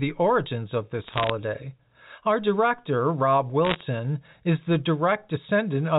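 Bit errors on a digital phone line flip individual bits in the 8-bit A-law telephone samples, roughly 0.7 percent of bits, from 1.04 to 1.30 s, just after "origins of", and again at roughly 1 percent from 3.65 to 3.82 s. A flip in a high bit or in the sign of a loud sample becomes a sharp tick, heard as brief crackle over the speech.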